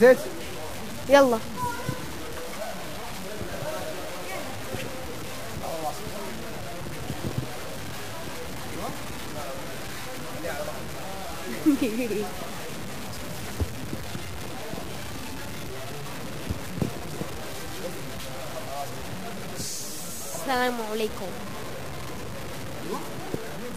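Low bit depth without dither runs throughout the audio: it is likely truncated to about 6 bits with no dither, so the rounding error tracks the signal, leaving grainy, level-dependent distortion only about 10 dB below it, with quiet passages turning gritty or sputtering.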